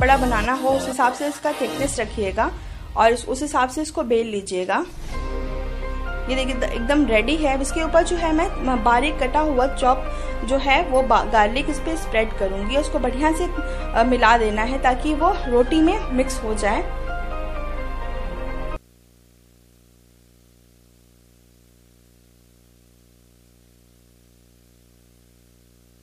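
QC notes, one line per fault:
Throughout, video or display buzz: there's a steady buzz locked to a 60 Hz field rate, with a gritty hash riding on top of it. It sits well under the main sound, roughly 35 dB down, but it never lets up. That's a screen or video cable leaking into the audio path, so each picture refresh pulses into the signal and the sharp edges of that interference spray harmonics up into the hash.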